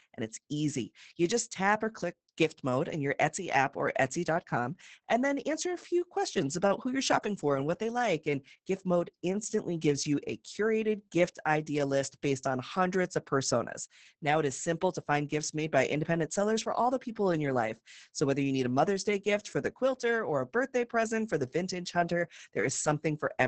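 Throughout, heavy Opus voice compression: the coarsely coded SILK excitation makes speech hoarse and robotic, unlike a plain low-pass, with nothing above 8.7 kHz, fitting roughly 10 kbps.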